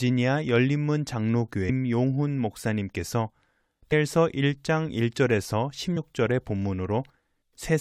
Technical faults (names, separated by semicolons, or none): damaged data in a compressed stream